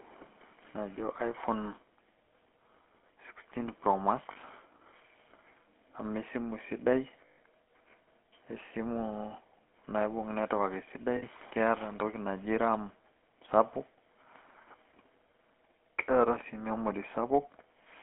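Throughout, the speech has passed through the GSM full-rate codec: the vocal tract is modelled and excited by sparse regular pulses, consistent with the 13 kbps full-rate coder, inside a 250 Hz to 3.4 kHz line band. The result is a plainly audible buzzy, gravelly roughness and muffled top end.

At 4.32 to 4.37 s, 7.26 to 7.38 s and 11.16 to 11.23 s, lost GSM frames are concealed by repeating the last good frame, for 40 ms, 120 ms and 60 ms. Each leaves a brief rough, metallic ring, longest at 7.26 s.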